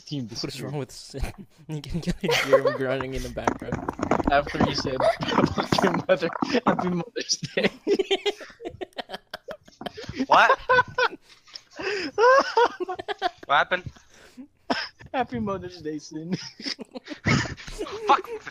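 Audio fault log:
No faults detected anywhere in this recording.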